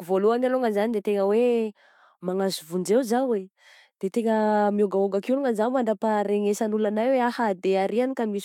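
No technical faults are audible.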